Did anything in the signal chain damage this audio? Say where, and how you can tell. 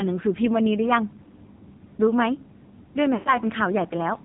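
Yes, at the codec stage. The whole clip has the AMR narrowband mobile codec's sound: nothing above 4 kHz, and buzzy, synthetic-sounding speech with heavy damage. That points to a low AMR-NB mode near 6 kbps. On a spectrogram the energy stops at a hard ceiling at 4 kHz, and the harmonics look smeared and pulse-driven instead of cleanly striated. The encoder rebuilds speech from a vocal-tract model and a few excitation pulses, and at this bit budget it drops most of the fine detail.

The network stage caused lost AMR speech frames in two places. From 1.24 to 1.29 s there is a brief dip, fitting about 20 ms of missing audio. From 3.14 to 3.37 s the sound is drawn out and fades to near silence, fitting about 120 ms lost, and it comes back weak. The decoder hid each gap by repeating the last good pitch and filter settings at falling gain. On the waveform this shows as a decaying envelope, and on the spectrogram as frozen, fading harmonics.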